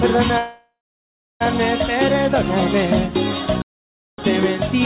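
From 0.38 s to 1.42 s there is a call audio freeze: the last sound is stretched into a fading buzz or hiss, then about 0.67 s of silence. The likely cause is packets held up until the jitter buffer emptied. Playback then resumes where it stopped, adding roughly 1.02 s of delay without losing any audio.

At 3.62 s the sound cuts out mid-flow in a playback stall lasting 0.56 s, ending at 4.18 s. It is likely that the player ran short of data or its thread was blocked. The narrowband call audio, with nothing above 4 kHz, then continues.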